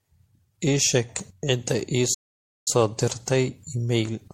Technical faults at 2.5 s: generation loss; playback stall

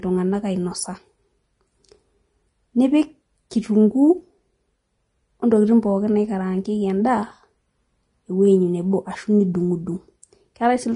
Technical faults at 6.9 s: Vorbis compression

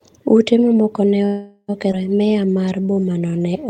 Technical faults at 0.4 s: none

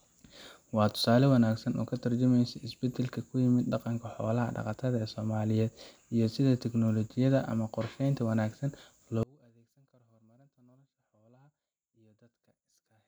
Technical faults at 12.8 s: one channel inverted

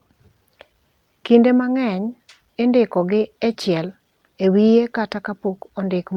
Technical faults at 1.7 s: none

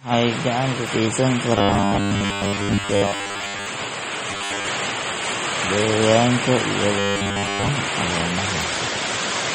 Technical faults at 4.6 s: MP3 compression; robotic sound from repeated short buffers

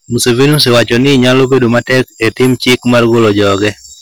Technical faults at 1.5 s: hard clipping

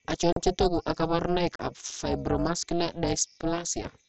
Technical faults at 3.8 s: overlap-add ripple

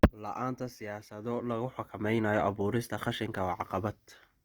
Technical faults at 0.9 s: Opus compression

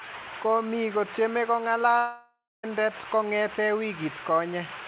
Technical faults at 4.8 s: none

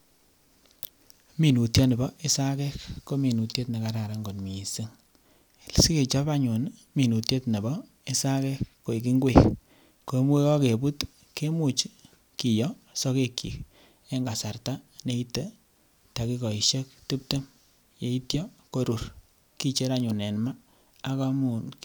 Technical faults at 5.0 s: none

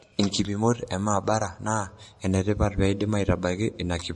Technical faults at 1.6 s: transcoding between lossy codecs

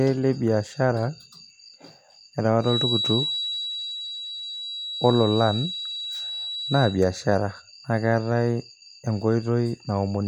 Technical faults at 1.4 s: none

